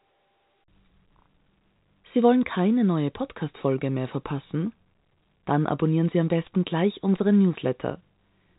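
No technical faults can be heard in this speech, which arrives over an ordinary G.711 telephone channel with its bandwidth ending near 3.8 kHz.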